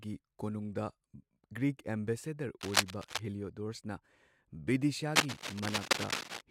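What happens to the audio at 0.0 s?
Nothing goes wrong at 0.0 s; the audio is intact at that moment.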